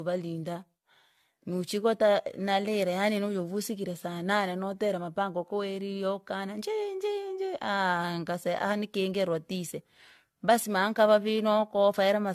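Speech throughout showing generation loss: swirly, hollow, smeared, with blurred consonant attacks, likely from AAC re-encoded about four times at roughly 64 kbit/s; a spectrogram shows patchy holes and smeared onsets.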